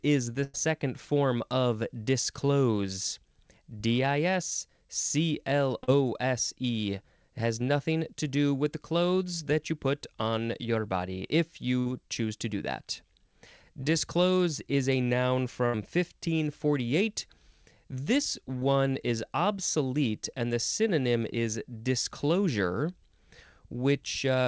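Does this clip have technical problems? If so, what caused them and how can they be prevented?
Yes. The speech has two kinds of packet loss, heard over a call path whose audio stops at about 8 kHz, which fits a 64 kbit/s G.722 wideband link.

Burst of packet loss: at 0.44–0.56 s, between "is the" and "form of disclose", at 11.80–11.88 s, between "on your body if" and "choose to do that", and at 15.66–15.75 s. Several consecutive packets went missing, about 100 ms, 60 ms and 80 ms respectively. The receiver stretched the last sound and faded it down, giving a held buzz or decaying hiss before the speech resumes with that stretch skipped. Prevention: reduce network congestion and add forward error correction or redundancy so bursts can be rebuilt.

Short concealed packet loss: at 5.84–5.90 s, 13.84–13.88 s and 18.59–18.63 s, the last just before "is obsolete and the". Here only 20 to 40 ms went missing. 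The decoder synthesised a substitute from the preceding pitch or noise and blended it back in, heard as a brief smear or wobble where a short consonant can be lost. Prevention: a slightly deeper jitter buffer and in-band FEC would let these isolated late or lost packets be recovered.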